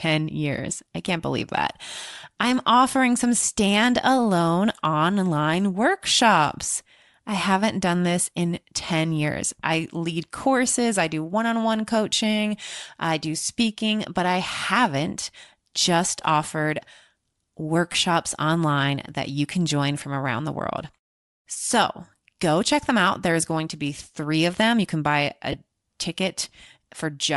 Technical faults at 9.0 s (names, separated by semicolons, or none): Bluetooth LC3 compression